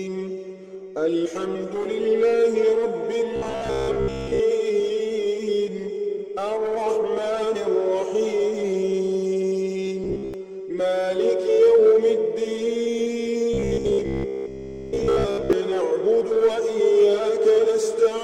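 Three stretches of robotic sound from repeated short buffers show up here, at 3.36 to 4.41 s, 10.04 to 10.34 s and 13.54 to 15.53 s. Each turns the audio into a stiff, metallic buzz pinned at about 66.8 Hz, which matches a loop of roughly 15 ms. The likely cause is data arriving too slowly, so playback keeps recycling that last sliver and skips most of the real audio in those spans.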